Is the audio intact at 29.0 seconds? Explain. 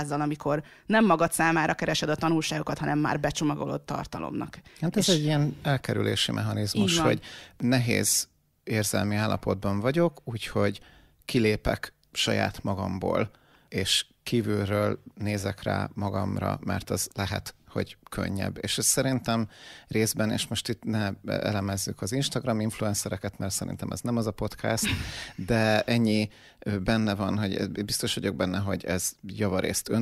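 Yes, the speech at 29.0 seconds is intact, with no audible fault at that moment.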